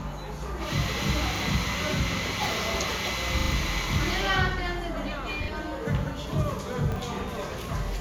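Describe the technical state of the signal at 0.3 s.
At 0.3 s the signal is intact, with no audible fault at that moment.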